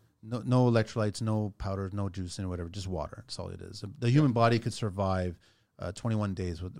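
No technical faults can be heard anywhere in the speech.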